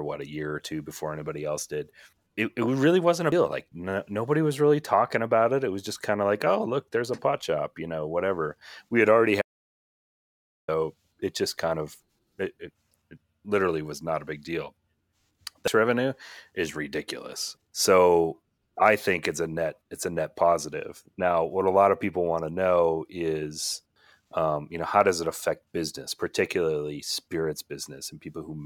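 Speech interrupted by two brief glitches, at 3.32 s and again at 15.68 s. Both are damaged data in a compressed stream: corrupted bytes made the decoder misread frames, lose sync and jump to the next valid header. From 9.42 s to 10.68 s the speech cuts out mid-flow for about 1.27 s of total silence with no room tone. This audio dropout to silence was likely caused by a lost input while the recorder kept writing silence, so that stretch of speech is gone.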